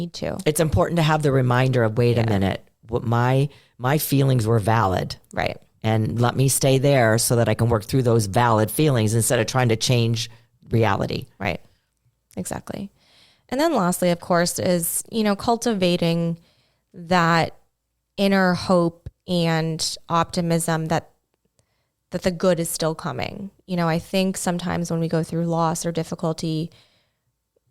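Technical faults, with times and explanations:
5.0–9.0 s, adaptive stream at a lower bitrate: after "my my feelings were" the player switched to a lower-bitrate rendition as the connection slowed, so the speech abruptly grows codec artefacts, fitting a drop from Opus 64 to 32 kbit/s, recovering gaplessly before "instead of trying to".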